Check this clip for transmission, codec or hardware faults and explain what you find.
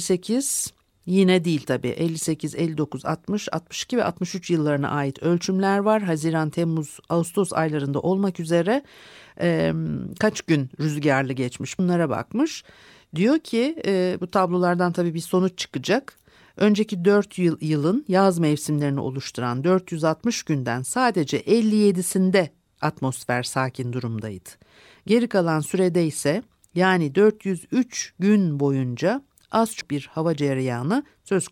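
Compressed frames are skipped twice in this speech recording. At 11.79 s and again at 29.81 s, whole compressed frames never reach the output, either lost from the stream or rejected by the decoder as corrupt, so playback leaps forward. The first jump drops roughly 70 ms, about two 32 ms frames' worth; the second loses roughly 150 ms, around four frames.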